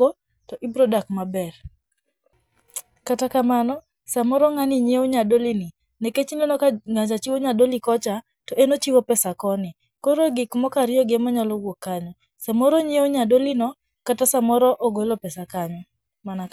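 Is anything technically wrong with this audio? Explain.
No, the signal shows no technical problems at any point, with nothing in the recording chain intruding on the speech.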